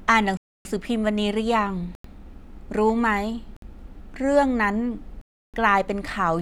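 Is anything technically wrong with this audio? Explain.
Yes. The speech drops out four times, at 0.37 to 0.65 s, 1.95 to 2.04 s, 3.57 to 3.62 s and 5.21 to 5.54 s. Each is a hard cut to a block of digital silence. The output buffer likely went unfilled and was zeroed; the 93 ms gap fits a 4096-sample buffer.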